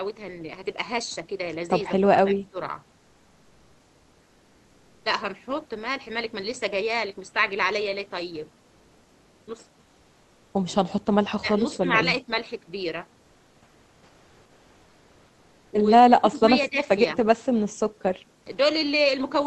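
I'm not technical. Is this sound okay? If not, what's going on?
No. Speech suppressed in double talk occurs at 2.01 to 2.58 s, 11.37 to 11.94 s, 12.23 to 12.29 s and 16.09 to 16.89 s. The voice dips sharply in volume, mildly near 12.2 s, likely because the echo canceller turned it down while the other side was talking.

Comfort noise in place of the background runs from 8.61 to 9.47 s. The real background is likely swapped for steady, featureless synthetic noise, a little quieter, during a pause in the speech.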